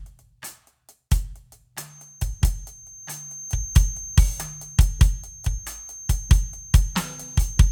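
A music clip with a feedback whistle entering at 1.83 s and lasting to the end: a thin, steady tone at 6.3 kHz, swelling and fading slowly in level, roughly 20 dB under the music. Likely cause is a loudspeaker-to-microphone loop held just at the edge of feedback. A spectrogram shows one narrow horizontal line at 6.3 kHz; the waveform barely reveals it.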